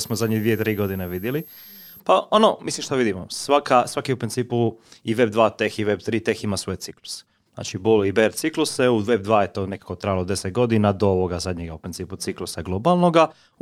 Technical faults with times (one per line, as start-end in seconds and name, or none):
0.00-2.00 switching supply whistle